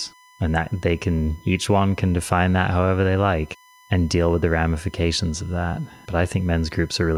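A speech clip with a steady, thin whine running from start to finish. This is USB whine, pitched at 1 kHz, which is also where it is strongest. It sits roughly 30 dB below the speech. The 1 kHz pitch matches the bus's 1 ms frame rate. Current drawn in those frames leaks into the audio through shared power or ground, leaving a fixed-pitch tone under everything.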